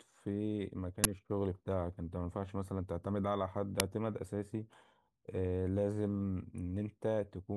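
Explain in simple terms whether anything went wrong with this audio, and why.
Two quick bursts of harsh digital noise cut into the speech at 1.04 s and 3.80 s. That's an uninitialised buffer: the player grabbed a chunk of memory before any audio was written into it. The leftover junk played as sound, roughly 12 ms (fits a 512-sample buffer) and 3 ms (fits 128 samples).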